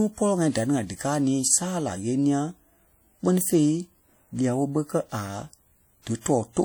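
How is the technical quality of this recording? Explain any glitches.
The recording is marred by plainly audible compression damage throughout the speech. The sound is ringing and washy, with a hiss that swells and fades along with the signal. The likely cause is WMA compression. A transform codec working in long blocks spreads its quantisation noise over tens of milliseconds and drops weak spectral lines, and the degree of damage fits a bitrate of around 48 kbps. On a spectrogram, content reaches about 20.1 kHz, with blotchy holes between harmonics and smeared energy around onsets.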